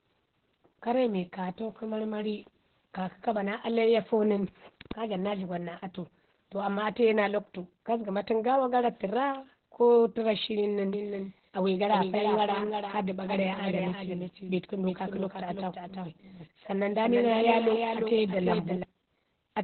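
Speech runs through the whole clip under heavy Opus voice compression. Nothing is present above about 4.3 kHz, and the voice sounds muffled, hoarse and slightly robotic. That combination points to the SILK coder in narrowband mode at a very low rate, around 8 kbps. A plain low-pass filter would dull the top end in the same way but leave the voice smooth, so the grainy, coarsely coded texture is what marks this as codec damage. From 10.93 s to 18.83 s a doubled audio track appears. A full-band second copy of the same sound trails the original by roughly 300 ms at about 5 dB lower. This is not an echo or room reverb, because the copy has no decay and no room colour, and it starts and stops abruptly at those two times. The likely cause is the audio being captured a second time through a slower path or held out of step by an edit.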